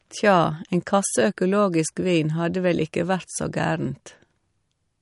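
Throughout, the speech sounds watery and swirly, with nothing above 11.2 kHz. This is likely MP3 compression at a bitrate fitting around 48 kbps, which cuts the treble and zeroes weak frequency lines.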